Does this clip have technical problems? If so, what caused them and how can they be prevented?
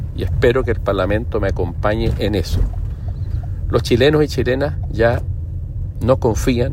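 No, this clip has no technical problems, so there is no cause to explain and nothing to prevent.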